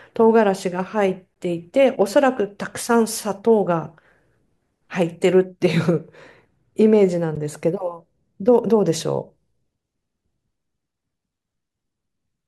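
At 1.34 s and again at 7.36 s there's a gap between stream segments. Mismatched timestamps leave holes of about 17 ms and 12 ms filled with hard-edged silence, spaced like 6-second segments.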